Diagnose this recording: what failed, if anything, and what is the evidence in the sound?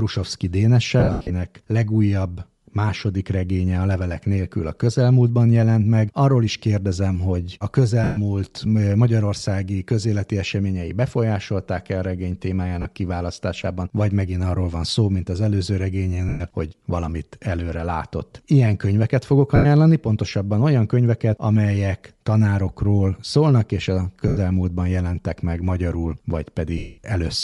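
The speech carries a breathy, grainy upper edge throughout. At the codec stage this is likely Bluetooth LC3 compression, which zeroes high bands and fills them with noise.

Lost LE Audio frames on the radio link cause short noisy smears at 1.0 s (scattered over 0.3 s), 8.04, 12.82, 16.29, 19.56, 24.28 and 26.78 s. The decoder fills these gaps by repeating the last spectrum with random signs.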